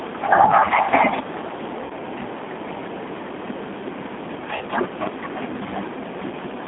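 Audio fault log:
Throughout: G.729 codec. The speech is rebuilt from a vocal tract filter, a pitch predictor and a few pulses per frame at 8 kbit/s, giving a plainly rough, synthetic edge. On a spectrogram energy sits between about 200 Hz and 3.6 kHz, with nothing above.
1.84–1.92 s and 4.56–4.65 s: VoIP packet loss concealed by the speech codec. About 60 ms and then 40 ms of audio went missing. The decoder extended its last pitch and filter at falling gain, so the sound is stretched into a buzzy tone or coloured noise that fades out. The waveform shows a repeating, shrinking cycle, and the spectrogram shows smeared, flattened harmonics.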